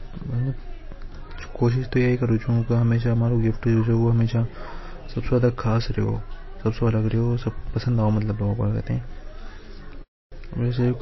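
Throughout the clip the encoder appears starved of bits, likely from MP3 compression at a low bitrate in the region of 24 kbps. With too few bits, it discards everything above about 5.8 kHz and drops weaker frequency lines that flicker in and out from frame to frame. The result is plainly audible: the speech sounds dull and band-limited, with a watery, swirling texture, metallic chirps on s sounds, and smeared consonant attacks.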